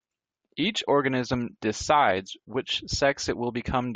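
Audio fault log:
No faults detected in this recording.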